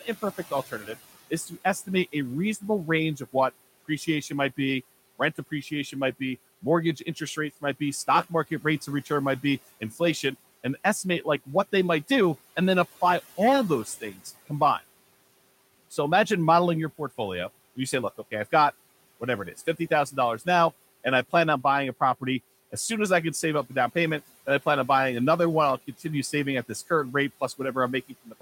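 The noise suppressor mistook parts of the speech for the room noise, which sits about 21 dB below the voice, and pulled them down with it. This speech cut by the noise suppressor happens at 9.8–10.0 s after "of return might be" (about 13 dB), at 13.85–14.26 s after "and then apply all" (about 9 dB), and at 28.09–28.33 s (about 8 dB). Each time, roughly a tenth of a second sounds swallowed and faint.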